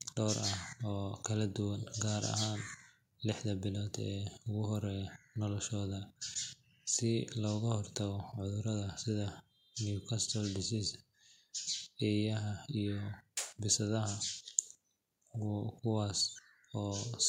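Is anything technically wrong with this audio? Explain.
No, nothing technical stands out here; the speech comes across steady and intact all the way through.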